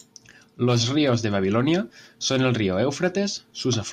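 No technical faults are audible.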